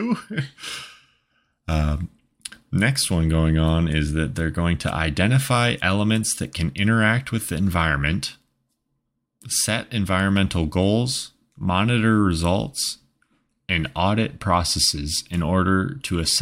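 No technical faults occur anywhere in the speech, so there are none to describe in time order.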